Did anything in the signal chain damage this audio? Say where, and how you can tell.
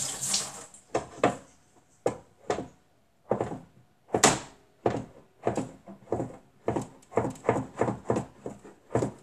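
Yes: Vorbis compression, likely at the codec stage, throughout. Coarsely quantised treble turns fine detail into hiss and grain, blurring attacks, which fits roughly 36 kbps.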